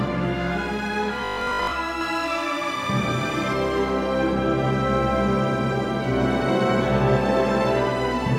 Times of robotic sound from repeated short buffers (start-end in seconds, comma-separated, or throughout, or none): 1.25-1.73